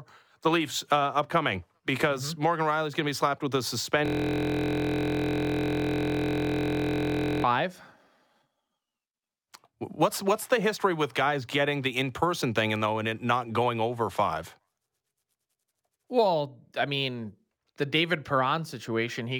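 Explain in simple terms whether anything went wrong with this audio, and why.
A system hang loop froze playback right after "be slapped with a". From 4.06 to 7.44 s, one 23 ms scrap of sound repeats about 43 times a second, making a steady buzz.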